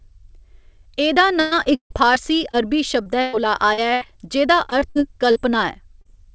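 Repeated packet loss (robotic sound) runs from 1.40 to 4.06 s. Audio kept failing to arrive, and the receiver patched each hole by extending the last sound. There are around a dozen gaps totalling about 0.6 s, the longest 150 ms, so roughly a fifth of the stretch is synthetic. It comes across as choppy. A second, shorter burst from 4.70 to 5.37 s has four gaps, the longest 60 ms, and the same choppy stutter.

Short concealed packet loss appears at 6.01 to 6.07 s, where about 40 ms never reached the decoder in time. The receiver bridged the hole by continuing the preceding sound and then blending back into the real signal, so it is heard as a brief smear or wobble rather than silence. Throughout the clip the band stops at 8 kHz, which fits a wideband call codec such as G.722.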